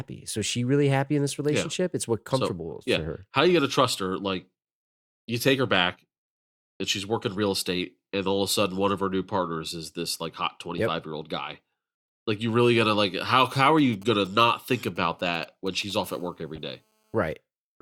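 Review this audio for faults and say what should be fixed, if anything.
A galloping dit-dit-dit of short 217 Hz buzzes starts right after "really going to like" and runs from 13.31 to 15.92 s, roughly 25 dB below the speech. These are GSM signalling bursts: a nearby 2G phone is sending short groups of radio bursts while signalling, and the audio circuit rectifies them into sound.

A hard, raspy 217 Hz buzz with many harmonics follows from 16.04 to 17.35 s, about 35 dB below the speech and unrelated to it. This is GSM phone buzz from the same kind of source. The phone is now in a call, transmitting bursts 217 times a second, and the circuit demodulates the pulse train.

Inside that buzz, from 16.55 to 16.58 s, a brief artefact is heard: a chirp, squeak, blip or noise burst. It is a corrupt frame decoded. Bit errors hit a few compressed frames, and the decoder played them anyway, putting energy at the wrong frequencies for their length.

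To prevent these, keep mobile phones away from the recording chain or switch them off, use shielded, RF-filtered cabling, and carry the encoded stream over a link with error checking so damaged frames are concealed rather than played.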